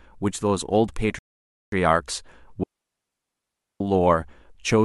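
At 1.19 s the player exhausts its downloaded buffer and halts in a rebuffering stall until more data arrives. The speech drops to silence until 1.72 s, then picks up exactly where it stopped, so nothing is missing but about 0.54 s of dead air is inserted.

From 2.63 s the digital wireless link loses too much data and the receiver mutes itself, a digital wireless dropout. After a very brief fade the speech vanishes into a clean hole of near silence lasting about 1.17 s, ending at 3.81 s, with no noise burst at either edge.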